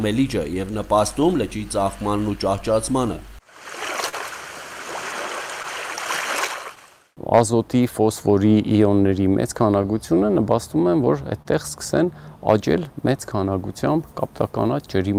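The tempo of the sound is faintly unsteady throughout, with small hiccups at uneven intervals. This is clock drift between sender and receiver: the sender's audio clock runs roughly 3 percent slower than the receiver's, so the receiver's jitter buffer keeps draining and the receiver has to keep stretching the audio to avoid running dry.

Those repeated timing corrections run from 0.54 s to 14.99 s. The playback is slowed to 98 percent of its original speed, and the audio drags very slightly rather than stepping cleanly. The corrections all go the same way, each one repeating or lengthening a small slice. Together they add up to about a third of a second of extra material, spread unevenly across the stretch, which is why the hiccups never settle into a regular rhythm.

At 4.09 to 4.15 s a sound is held too long, with a slight buzz or dip. This is a short stall from a late packet. The packet wasn't there when it was due, so the buffer ran empty and the receiver prolonged the last sound for 39 ms until the packet arrived. 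It then picked up where it had left off, so nothing is missing.

Between 5.63 and 6.79 s there are scattered short gaps: roughly four tiny ticks or smears, the longest only around 15 ms. Each marks a late or lost packet that the receiver patched by continuing the preceding sound. Together the patches fill about 40 ms, roughly 3 percent of that span, so the sound stays largely clear apart from these brief blemishes.

A second short stall from a late packet comes at 11.42 to 11.47 s. The sound hangs for 27 ms with a slight buzz or dip before resuming. Again the buffer ran out while waiting for a packet, and the receiver filled the wait by stretching what it already had.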